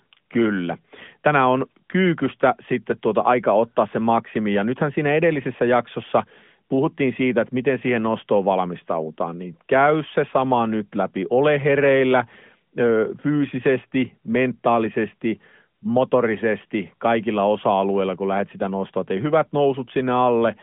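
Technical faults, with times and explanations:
No technical faults can be heard in this clip.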